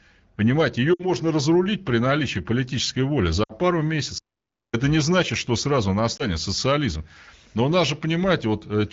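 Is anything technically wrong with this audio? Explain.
Yes. The speech has two kinds of fault.

Lost AMR speech frames occur at 0.94 to 1.07 s, 3.43 to 3.52 s and 6.17 to 6.24 s. The audio comes through AMR wideband (HD Voice). When a frame fails its checksum, the decoder repeats the last good pitch and vocal tract settings at falling gain. The first two gaps fit about three 20 ms frames each. The speech drops to near silence within two frames, then returns weak and rough. The third gap fits a single frame and is a short dip.

An audio dropout to silence runs from 4.18 to 4.74 s, about 0.55 s. The speech cuts off mid-flow and resumes abruptly. The gap is silent, with no room tone beneath it. Whatever was said there is gone. The likely cause is a lost input, such as a failed link or brief mute, while silence kept being written.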